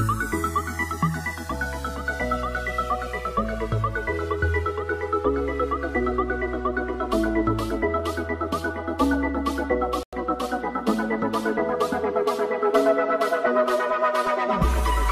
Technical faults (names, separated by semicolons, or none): channels drifting apart; digital broadcast dropout